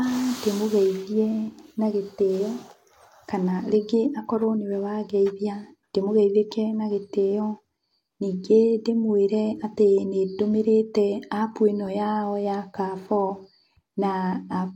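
At 7.77 s the level drops by about 5 dB in a single step and recovers at 7.91 s, a sudden gain jump, likely from a gain setting applied without a ramp. Unlike a fade or compressor action, the speech and background noise fall together instantly.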